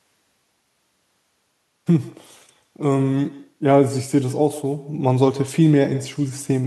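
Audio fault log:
throughout, echo with no canceller: speech is shadowed roughly 150 ms later by a thinner copy about 19 dB down, far-end loudspeaker leaking back uncancelled.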